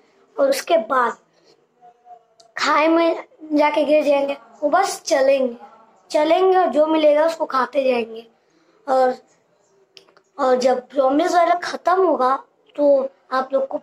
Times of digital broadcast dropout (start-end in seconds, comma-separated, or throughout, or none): none